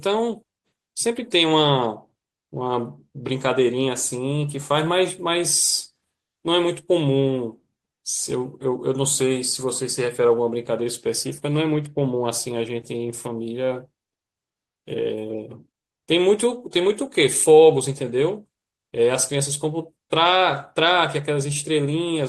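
Clock drift between sender and receiver runs through the whole clip. The sender's audio clock runs about 2 percent slower than the receiver's, so samples arrive a little more slowly than they are played out. The jitter buffer keeps draining instead of holding a steady level. The receiver has to keep adding a little material to avoid running dry, and the speech plays at roughly 98 percent of its proper rate.

Repeated timing corrections happen from 0.45 s to 21.97 s. To make up the shortfall, the receiver keeps repeating short slices of the signal. The edits all stretch the speech and are unevenly spaced. Together they add about four tenths of a second. Each repeat is tiny, so the effect is heard as faint hiccups and a slightly unsteady, dragging pace, not as clear glitches.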